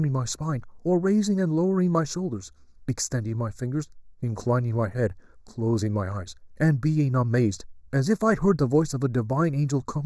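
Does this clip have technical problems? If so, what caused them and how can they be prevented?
Yes, there's channel delay (comb filtering) running through the whole speech clip. One channel lags the other by a fraction of a millisecond, a few samples, so summing to mono cancels evenly spaced frequencies from around 3 kHz up, giving a hollow, phasey sound. To prevent it, time-align both channels before any mono fold-down.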